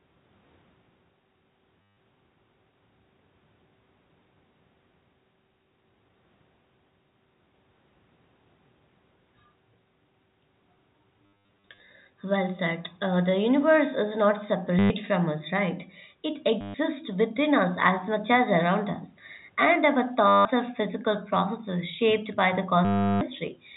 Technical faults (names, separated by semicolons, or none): packet loss with last packet repeated